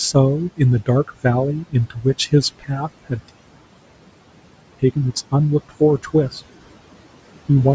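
Throughout the clip, a noise suppressor pulls steady background down by about 18 dB frame by frame. From 1.63 to 2.06 s, and again from 2.59 to 2.71 s, the speech is cut by the noise suppressor: it mistakes quiet stretches of speech for noise and drops them by about 18 and 17 dB, so roughly 150 ms and 100 ms of speech in those spans sound swallowed and faint. At 3.29 s the sound stops dead in mid-flow for 1.48 s, a playback stall likely caused by the player running out of data or its thread being blocked, and it resumes at 4.79 s. From 4.79 s to the end, a time-compressed catch-up trims the backlog by cutting and cross-fading small slices, so the speech runs about 1.15 times faster at unchanged pitch. Across all of this the call microphone processing leaves nothing above 8 kHz, and room noise sits about 18 dB under the speech.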